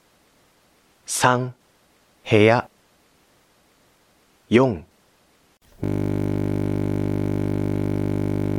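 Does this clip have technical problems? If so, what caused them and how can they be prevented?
Yes: from 5.84 s to the end, a system hang loop repeats one frozen 20 ms buffer as a 50 Hz buzz that replaces the sound, unlike hum lying beneath it. Stable drivers and unblocked audio threads prevent it.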